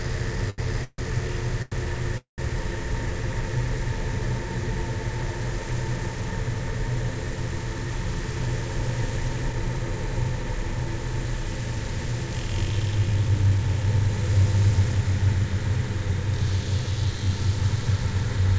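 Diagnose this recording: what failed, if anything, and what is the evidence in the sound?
Short stall from a late packet, at 0.50 to 0.60 s and 1.62 to 1.74 s. Network jitter starved the jitter buffer, so the receiver held the last sound for 80 ms and then 94 ms, a sustain with a slight buzz or dip, before resuming exactly where it stopped with nothing lost.

Call audio freeze, at 0.84 to 1.00 s and 2.18 to 2.40 s, likely from packets held up in the network. The buffer ran dry and the receiver extended the last sound into a decaying buzz or hiss, reaching silence for 20 ms and then 130 ms, inserting 142 ms and 204 ms of delay.

Jitter buffer speed-up, from 8.26 to 14.24 s. The buffer had accumulated extra delay, and the receiver drained it by cutting short pitch-period pieces over and over. The audio runs at 105% speed with pitch unchanged, about a third of a second shorter, within the G.722 call path's 8 kHz band.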